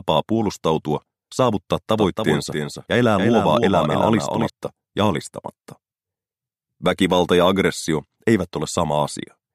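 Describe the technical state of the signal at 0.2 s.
At 0.2 s the signal is intact, with no audible fault at that moment.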